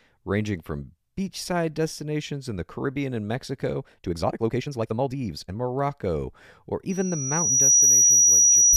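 From 3.82 to 5.56 s the speech suddenly rushes at about 1.83 times its pace, while the pitch stays unchanged. This is likely a time-stretched section, where software squeezed the passage by dropping short pieces to shorten it.

At 6.89 s a thin, piercing tone near 5.8 kHz appears and swells over roughly a second into a squeal around 10 dB above the speech, lasting to the end. This is loudspeaker feedback squeal: the microphone picked up its own loudspeaker, and that frequency kept reinforcing itself.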